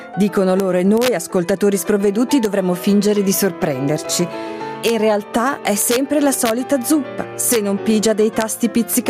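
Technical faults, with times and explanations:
Throughout: gain pumping. The background swells by roughly 10 dB in the gaps and ducks under each loud sound, likely from excessive input gain with a fast limiter clamping it. The waveform envelope looks flattened, with noise-floor bands breathing on the spectrogram.
0.6, 0.98–1.08, 2.45, 4.88–4.90, 5.82–5.96, 6.34–6.51, 7.53–7.56 and 8.41 s: integer overflow. Peaks at or about 1 dB past full scale wrap to the opposite sign, giving violent cracks sharper than clipping. The waveform shows full-range vertical jumps, and the spectrogram shows bright broadband stripes.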